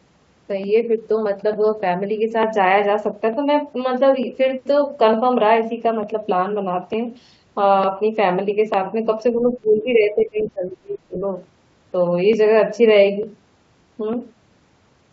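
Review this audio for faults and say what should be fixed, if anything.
Clock drift buffer slips: a regular click recurs every 0.90 s from 0.64 s to 15.03 s, about fifteen in all. The likely cause is two unsynchronised clocks several hundred ppm apart, so the buffer drops or repeats a few dozen samples each time. Lock both devices to a common clock or add adaptive resampling.

Speech suppressed in double talk: between 9.39 s and 11.17 s the speech dips by up to about 25 dB, for roughly a second and a half in total. The likely cause is the echo canceller muting the near talker while the far side spoke. Tune the double-talk detector and echo path model to keep near speech open during overlap.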